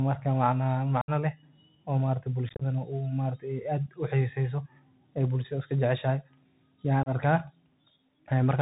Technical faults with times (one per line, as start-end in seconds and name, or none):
0.00-8.61 Bluetooth CVSD headset codec
1.01-1.10 unconcealed Bluetooth headset packet loss
2.49-2.63 unconcealed Bluetooth headset packet loss
7.03-7.09 unconcealed Bluetooth headset packet loss